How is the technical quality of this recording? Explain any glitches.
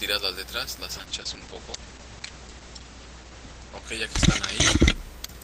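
The quality is poor from 0.92 s to the end, because of a call bitrate drop. The connection's bandwidth estimate fell, and the encoder was forced to code with far fewer bits, which fits a fall from about 32 kbps to roughly 9 kbps. It sat at its lowest for 1.4 s. With so few bits, detail turns rough and watery, and the top end collapses from 20 kHz to 8 kHz, muffling the sound. It never recovers before the clip ends.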